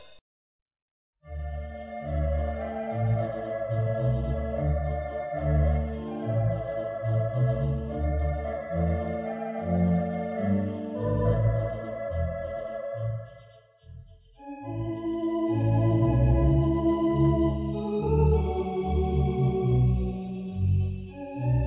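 No technical faults can be heard anywhere in the recording. Nothing drops out, jumps or breaks up at any point.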